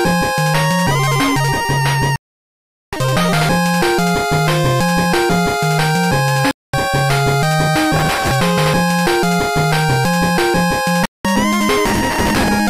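At 2.16–2.93 s, 6.51–6.74 s and 11.06–11.25 s, a digital broadcast dropout mutes the receiver until valid frames return, leaving holes of 0.77, 0.23 and 0.19 s. At 7.96–8.31 s and 11.86–12.48 s, processor overload crackle occurs as dozens of roughly 3 ms buffers miss their deadlines and replay stale audio, producing gritty tearing.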